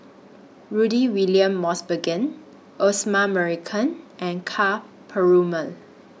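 No technical faults are audible.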